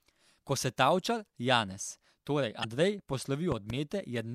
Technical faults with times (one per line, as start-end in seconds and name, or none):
2.61-2.65 damaged data in a compressed stream
3.52-3.72 loud pop